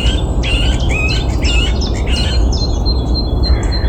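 At 0.88 s, compressed frames are skipped: roughly 70 ms of audio is lost, consistent with three 26.1 ms frames, so the audio jumps ahead at the join.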